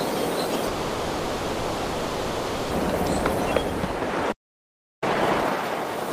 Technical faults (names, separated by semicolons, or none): long network dropout; playback stall; time-compressed catch-up